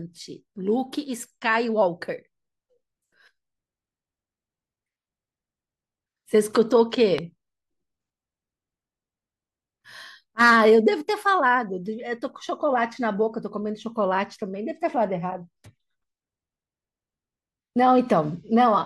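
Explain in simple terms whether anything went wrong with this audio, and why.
A loud pop hits between 7.18 and 7.20 s, a single sharp thump well above the speech, likely from a plug, switch or static spike. Unlike a dropout, the speech carries on underneath.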